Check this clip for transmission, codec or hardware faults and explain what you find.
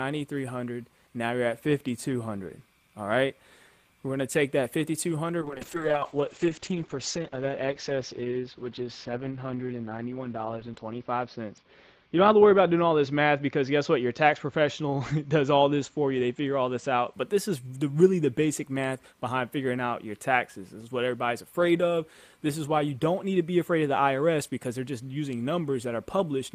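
One fault is present: a call bitrate drop from 5.43 s to 17.19 s. The link's bandwidth estimate fell, so the encoder coded far more coarsely. The upper limit shrinks from 20 kHz to 6 kHz, which fits a fall from about 32 to 8 kbps. The sound turns muffled and rough, worst for about 5.4 s, before recovering.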